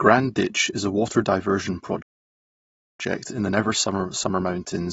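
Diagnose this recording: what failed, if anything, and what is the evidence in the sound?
Codec stage: the speech sounds dull and smeared throughout, with a fizzy, warbling texture on sibilants. This points to AAC compression, likely a low-bitrate AAC-LC encode at 24 kbps. A spectrogram shows a lowered high-frequency cut-off and patchy holes below it.

Playback stage: after "is a water diversion" the sound stops dead from 2.02 to 3.00 s, almost a full second, then resumes with "in the". This is a playback stall, likely the player running out of buffered data. The waveform shows a flat, silent gap.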